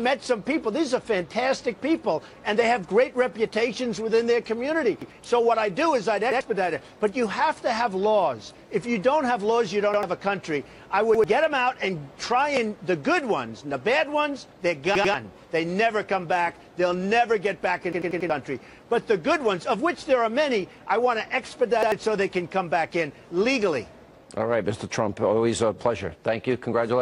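Repeated buffer stutters at 5.02, 6.32, 9.94, 11.15, 14.95 (two repeats), 17.93 (four repeats) and 21.83 s: late data replays the last 93 ms block, fitting a 4096-sample buffer.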